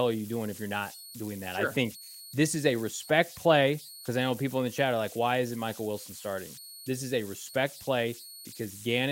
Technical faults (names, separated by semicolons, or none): converter idle tones